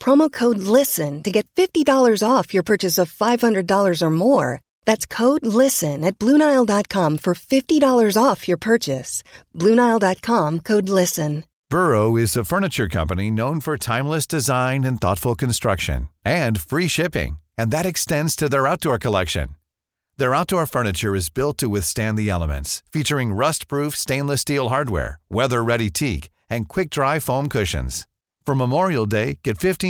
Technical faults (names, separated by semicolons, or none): none